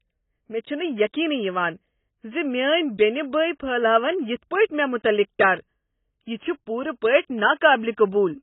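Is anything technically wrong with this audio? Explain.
Yes. Throughout, likely heavy AAC compression, fitting a bitrate around 16 kbps, cuts everything above 3.8 kHz and quantises coarsely, so the speech sounds dull, smeared and warbly.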